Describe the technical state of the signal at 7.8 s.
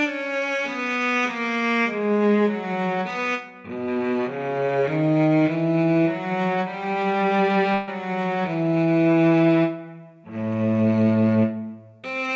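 At 7.8 s there is a burst of packet loss from 7.74 to 7.89 s: about 140 ms went missing, and the receiver stretched the preceding sound into a fading tail that looks smeared and repetitive on a spectrogram before the audio jumps ahead.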